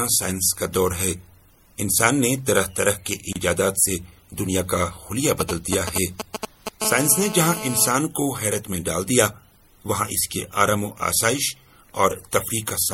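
MP3 compression runs through the whole clip, with plainly audible damage: a watery, swirling texture, dulled treble and smeared attacks. This likely comes from encoding at a low bitrate around 64 kbps, where weak frequency lines drop in and out from frame to frame.

A gap at a join of encoded pieces opens at 3.33 s. It is a silence of about 30 ms with smeared edges, and the sound resumes exactly where it stopped. The pieces were encoded separately and joined untrimmed, so encoder delay and final-frame padding remain as dead air.

GSM signalling bursts run from 5.40 to 6.82 s, a galloping dit-dit-dit of short buzzes roughly 5 dB below the signal. A nearby 2G phone is sending brief groups of radio bursts, which the audio circuit rectifies into audible pulses at a 217 Hz rate.

GSM phone buzz follows from 6.82 to 7.89 s. It is a hard, raspy, harmonic-rich 217 Hz buzz about 10 dB below the signal and unrelated to it. 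Here the phone is in a call, and its bursts arrive 217 times a second and are rectified into the audio.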